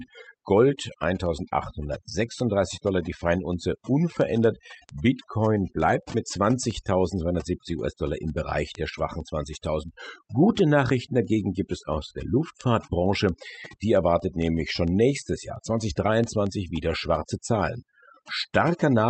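Speech throughout suffers from overdone noise removal: background drops and breaks up into twinkling specks. A spectrogram shows scattered isolated bins and ragged, holed speech harmonics, all below a clean 8 kHz ceiling from the call codec.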